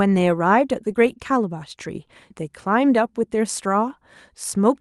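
No technical faults can be heard anywhere in this speech recording.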